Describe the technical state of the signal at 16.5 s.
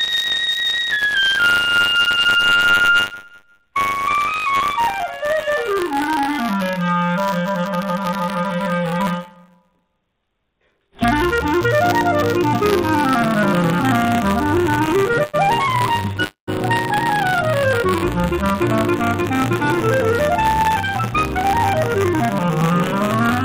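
At 16.5 s the signal sits right at the end of a call audio freeze running from 16.24 to 16.49 s. Packets were likely held up in transit and the jitter buffer ran dry, so the receiver extended the last sound as a fading buzz or hiss that drops to silence for about 120 ms. When the packets arrive, playback resumes where it stopped. About 234 ms of filler was inserted, nothing was lost, and everything after runs that much later.

Buffer tearing is also present here, as it is throughout. The program writing the ring buffer and the hardware reading it have slipped and cross inside every period. A small sliver of each buffer, roughly 2 percent, carries audio from about 40 ms earlier, with hard joins on both sides. This produces a rattling buzz at 100 Hz, consistent with 10 ms periods, heard only while sound is present.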